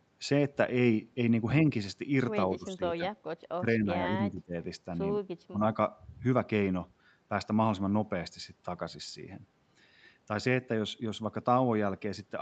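Speech suppressed in double talk occurs at 2.57 to 3.07 s, 3.6 to 3.88 s, 4.07 to 4.54 s and 5.5 to 5.59 s. The speech dips abruptly, by about 15 dB at its deepest and closer to 10 dB in the second event, and thins or drops out in short pieces. The likely cause is an echo canceller that, with both ends talking, could not tell this talker from returning loudspeaker echo and attenuated everything.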